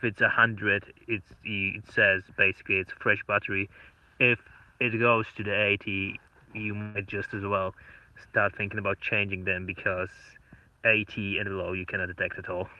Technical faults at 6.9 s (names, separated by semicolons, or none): burst of packet loss